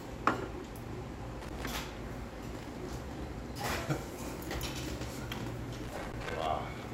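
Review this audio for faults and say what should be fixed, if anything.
Two irregular bursts of crackling and scratching break into the sound, from 1.42 to 1.77 s and again, longer, from 5.75 to 6.46 s. This is loose connector crackle: a worn or dirty contact in a plug or jack keeps making and breaking as it shifts, chopping the signal on and off in rapid, uneven bursts, with pops wherever DC on the line jumps at each break. Clean or replace the affected connector and secure the cable so it cannot move during recording.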